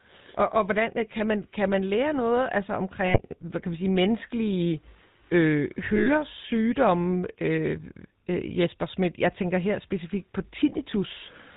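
From start to end the speech has a buzzy, gravelly roughness and nothing above 4 kHz, typical of the GSM full-rate codec at 13 kbps. It models the vocal tract and drives it with a sparse, regularly spaced pulse train, so the damage is plainly audible.

At 3.06 s, right after "man lære noget altså" and before "hvad kan vi sige", lost GSM frames leave an 80 ms metallic ring, consistent with four 20 ms frames replaced by the last good one. At 5.96 s, after "vi sige menneskelige øh", a 100 ms gap rings the same way.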